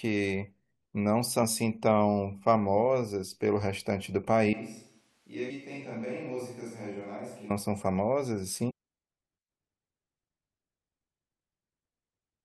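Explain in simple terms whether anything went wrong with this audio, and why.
Four short glitches come from damaged data in a compressed stream, at 1.42, 5.5, 8.69 to 8.71 and 11.38 seconds. Each is a brief glitch where the player lost its place. From 4.53 to 7.50 seconds the speech turns quieter, hollow and roomy, with more background noise. The likely cause is a switch to a distant microphone.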